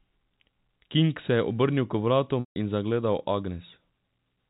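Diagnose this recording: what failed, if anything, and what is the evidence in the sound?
The network dropped packets and the receiver covered it with packet loss concealment by pitch repetition. At 2.40 s the last pitch period is looped, held briefly, then faded into silence until speech returns at 2.56 s with a short cross-fade. That 160 ms gap fits roughly eight 20 ms packets, carried over G.711 telephone coding.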